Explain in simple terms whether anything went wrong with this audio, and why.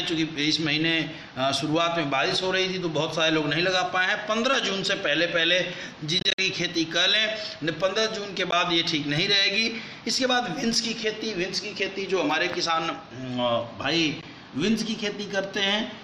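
Bluetooth dropouts, likely from packets reaching the headphones too late: the audio cuts out in short bursts between 6.2 and 6.39 s, with single 13 ms gaps at 8.51 s and 14.21 s.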